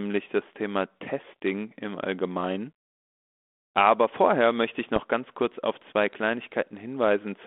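Speech carried over a 32 kbit/s G.726 ADPCM line, limited to about 250 Hz to 3.5 kHz. From 4.96 to 5.04 s there are bit errors on the ADPCM link. Pops and a rough, crackly burst break through, with brief jumps in level. The error rate is low, around a few bits per thousand. Each flipped bit throws off the decoder's step size and prediction, so the damage rings on for milliseconds after each hit.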